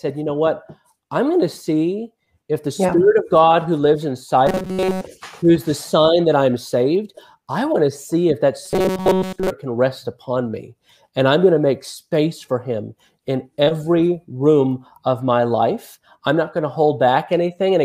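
From 4.47 to 5.01 s and again from 8.65 to 9.51 s, the sound turns into a rigid, metallic buzz pitched at 188 Hz: robotic sound from repeated short buffers. The likely cause is audio arriving too seldom, so a roughly 5.3 ms slice is looped over most of each stretch while real material is skipped. On a spectrogram, evenly spaced harmonics of 188 Hz replace the natural texture; the waveform shows identical short cycles repeating.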